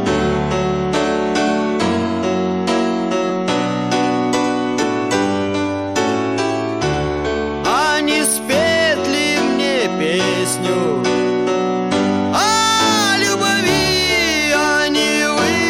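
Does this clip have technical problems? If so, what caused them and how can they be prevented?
Yes. Hard clipping runs through the whole clip. The audio is driven about 6 dB past what one stage in the chain can pass, so its loudest peaks are cut off flat. Only a small share of samples go over, which is why it is heard as crackle and grit on peaks and not as a constant fuzz. The harmonics from those flat tops give it a harsh, bright edge. That edge, and the fact that it tracks loudness, separate it from soft limiting, which rounds peaks off quietly. Clipping is prevented by lowering gain before the overloading stage and leaving several decibels of headroom.

Compressed frames skipped occurs at 4.82 s. A few consecutive frames of the encoded audio, each about 23 ms long, were never played, either because they were missing or because the decoder rejected them as damaged. The audio therefore jumps ahead by roughly a tenth of a second. 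A repeated fragment at the join would point to a stall instead. This is prevented by storing and sending the file over a reliable path with integrity checks, and by re-encoding from a clean source if the copy is corrupt.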